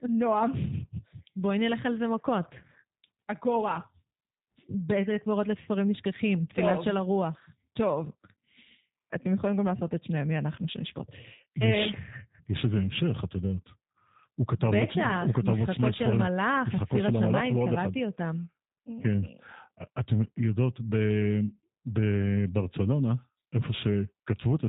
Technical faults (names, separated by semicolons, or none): G.729 codec